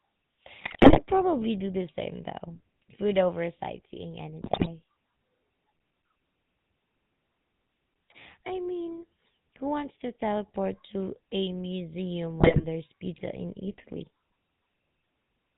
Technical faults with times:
0.00-15.57 GSM full-rate codec
0.58-1.01 GSM bit errors
4.42-4.68 GSM bit errors
12.40-12.65 GSM bit errors

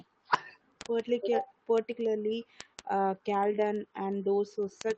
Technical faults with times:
0.12-4.98 word clock ticks

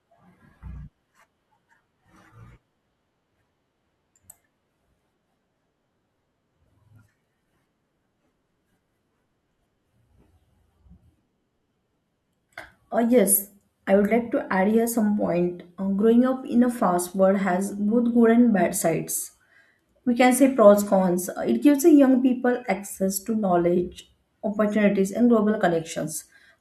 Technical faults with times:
none

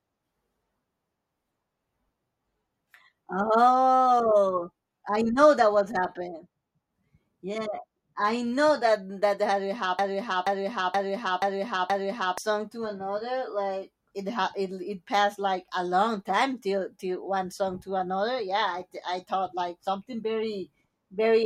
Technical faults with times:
9.99-12.38 broken-record loop

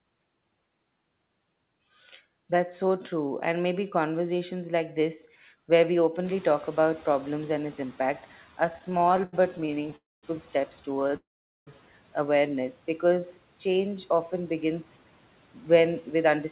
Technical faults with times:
6.24-8.29 noise suppressor catching up
8.66-9.94 repeated stalls (stutter)
9.96-10.25 call audio freeze
10.95-11.14 repeated stalls (stutter)
11.16-11.69 call audio freeze
12.89-13.26 jitter buffer slow-down
13.66-14.33 jitter buffer slow-down
15.86-16.45 jitter buffer speed-up

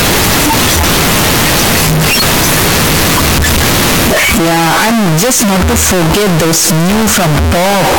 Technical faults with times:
0.00-7.98 float read as integer

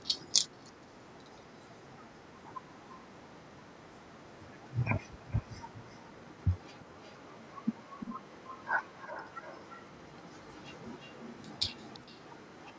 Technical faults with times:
5.06-12.79 echo leak

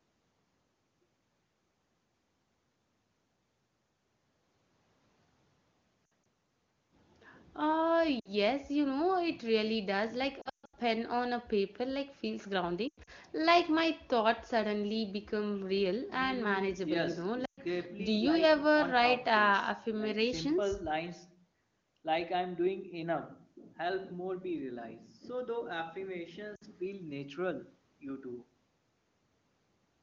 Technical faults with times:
6.09 lost AMR speech frames
8.20-8.29 lost AMR speech frames
10.41-10.75 lost AMR speech frames
12.88-13.10 lost AMR speech frames
17.45-17.60 lost AMR speech frames
26.55-26.64 lost AMR speech frames

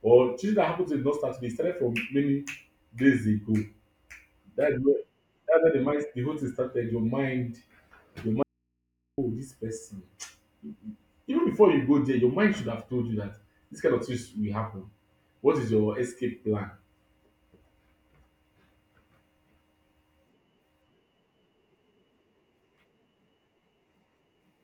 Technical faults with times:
8.43-9.18 audio dropout to a faint residue

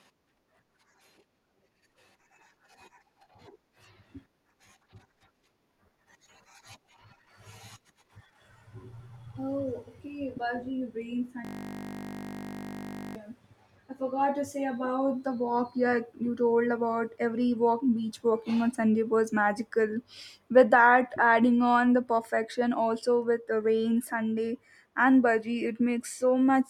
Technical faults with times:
11.45-13.16 system hang loop

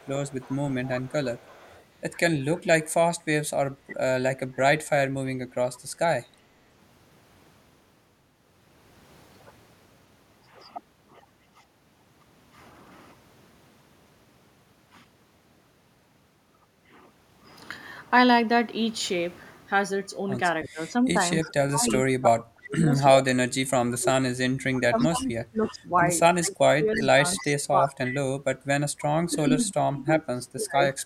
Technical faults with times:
0.00-1.84 echo leak
3.89-3.95 echo leak
20.64-21.93 echo leak
20.72-28.32 speech suppressed in double talk
23.21-23.98 echo leak
24.99-25.74 echo leak
26.93-27.48 echo leak
29.29-31.03 speech suppressed in double talk

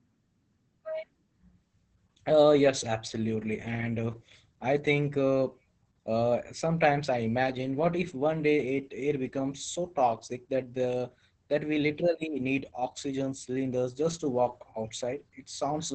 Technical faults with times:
0.00-15.94 Opus voice compression

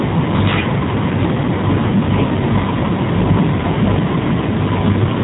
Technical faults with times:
0.00-5.24 G.729 codec

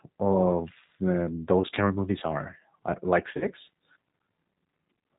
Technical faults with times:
0.00-5.19 G.729 codec
1.62-1.67 VoIP packet loss concealed by the speech codec
3.37-3.47 VoIP packet loss concealed by the speech codec

